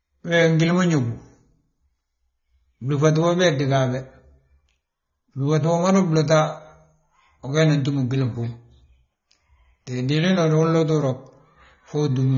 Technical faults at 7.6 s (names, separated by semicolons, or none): AAC compression